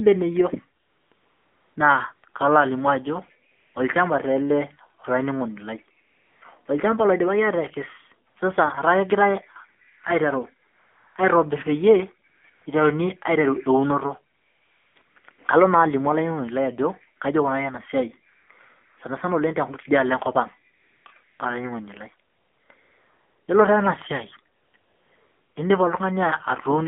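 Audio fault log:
throughout, AMR narrowband mobile codec: buzzy, synthetic-sounding speech held between 200 Hz and 3.5 kHz, because a coarse vocal-tract model rebuilds it, consistent with roughly 7.4 kbps.
0.82 to 25.56 s, AMR comfort noise: 22 gaps lasting 20 to 780 ms, including one ending just before "na kalo", switch to smooth steady hiss as the phone stopped sending speech.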